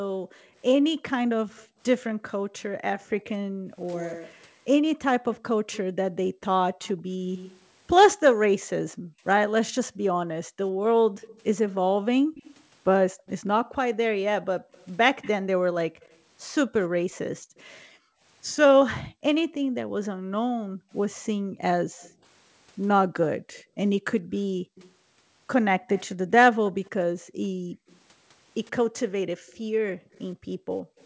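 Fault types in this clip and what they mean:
Background gated by the echo canceller: room tone keeps ducking, by up to about 40 dB, while the far end plays, as the canceller clamps the mic.
Echo leak: a copy about 15 to 30 dB below the speech trails it by roughly 105 to 130 ms in several stretches, likely loudspeaker pickup the canceller didn't fully remove.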